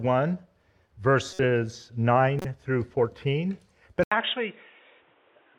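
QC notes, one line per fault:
1.33–1.44 s, 2.39–2.45 s and 4.20 s: corrupt frame decoded. Each event is a short, harsh blip or squeak that does not belong to the sound. Damaged bits in a compressed frame were played anyway. Wrong gains and misread codes put energy at the wrong frequencies for the length of the frame. The first two span a few frames each and are loud, near -20 and -15 dBFS. The one at 4.20 s is brief and faint, around -35 dBFS.
4.04 s to the end: input switched to a poorer device, likely. The sound drops out for about 80 ms. It returns duller and boxy, with nothing above 3.8 kHz. The level falls by around 5 dB. A new background noise sits roughly 35 dB below the signal. A sudden change of band, tone and noise at one moment points to a change of input, such as a headset profile taking over.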